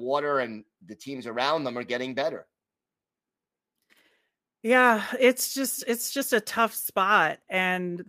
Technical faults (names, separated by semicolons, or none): none